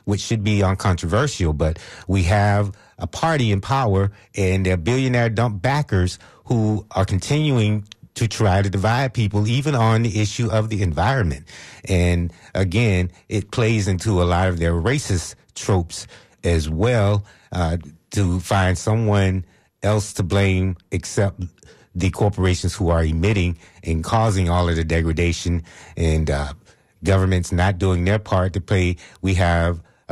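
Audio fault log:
Nothing stood out on listening to this speech recording.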